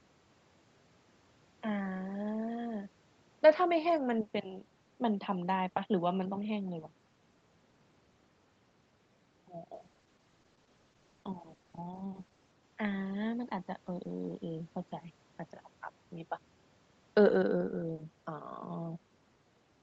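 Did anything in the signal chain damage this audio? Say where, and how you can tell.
Yes. From 9.75 to 12.59 s the speech turns rough and watery. This is a network-driven call bitrate drop, which forced the Opus encoder from 32 kbps to 10 kbps.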